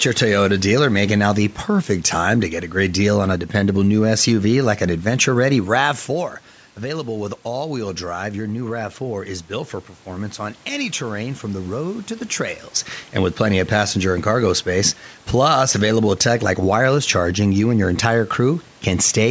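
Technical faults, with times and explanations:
No technical faults: the band tops out at 8 kHz from the call's microphone processing, the background noise is ordinary room noise, and the level changes around 6 s and 12 s are the talker moving relative to the microphone.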